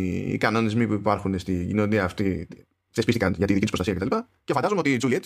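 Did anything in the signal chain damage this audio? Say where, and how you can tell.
Yes. From 2.19 s to the end, just after "που υπάρχουν στη κοινωνία", a time-stretched section runs about 1.92 times faster while pitch holds steady, sounding rushed. The likely cause is a software stretch that dropped short slices to shorten the audio.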